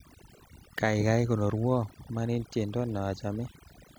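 Throughout, the speech sits over a near-silent, twinkling background: overdone noise removal, where aggressive reduction switched off frequency bands near the noise estimate, taking quiet voice detail with them.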